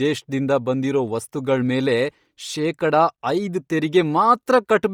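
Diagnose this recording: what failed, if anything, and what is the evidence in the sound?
The codec stage failed: the whole recording carries heavy damage from what is likely Bluetooth LC3 compression. From start to finish, the upper spectrum of the speech sounds hollowed out and refilled with hiss, giving consonants a breathy, grainy edge. The smearing fits a transform codec working in 10 ms frames at a low bitrate near 32 kbps. Unlike a plain low-pass filter, the top band isn't simply missing but replaced by noise.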